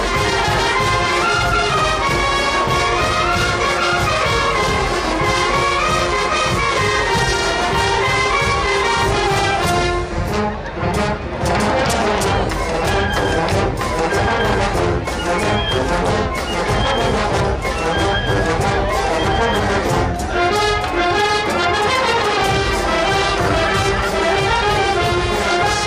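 Throughout, too few bits, likely from MP2 compression at around 80 kbps, switch off upper sub-bands, leaving the sound dull, gurgling and granular. At 7.94–8.04 s and 15.79–15.91 s, bit errors slip past DAB error correction and cause DAB burbling: short blips of noise in single sub-bands.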